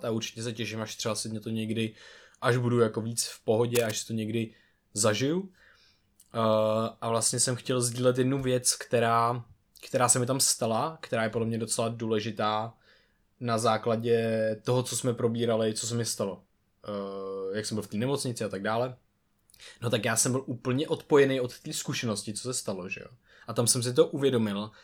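From 3.75 to 3.91 s, cable scratch noise: a brief burst of rough scratching over the speech, fairly loud, likely from a worn cable or connector being moved.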